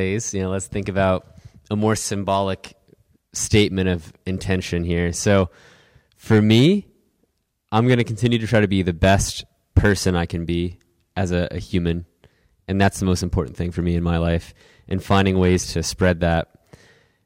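Throughout the speech, the loudest peaks crackle with a harsh, gritty edge. This is hard clipping: the signal was driven about 12 dB beyond what one stage could pass, so under one percent of samples had their peaks sheared flat, spraying harmonics high up the spectrum.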